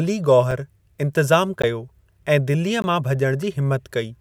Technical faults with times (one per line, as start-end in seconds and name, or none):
0.51 block of digital silence
1.62 block of digital silence
2.82 block of digital silence